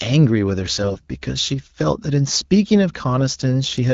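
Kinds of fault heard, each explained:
AMR bit errors: From 0.82 to 1.05 s the speech turns hoarse, scratchy and gargly while its pitch and loudness stay roughly in place. This fits about a dozen 20 ms frames received with a fair share of bits flipped, around 7 percent, in the less protected part of each frame. The checksum still passed, so the decoder used those frames, misplacing the excitation pulses and skewing pitch, gain and spectral values in the wideband speech.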